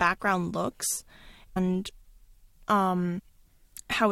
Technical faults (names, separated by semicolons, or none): compressed frames skipped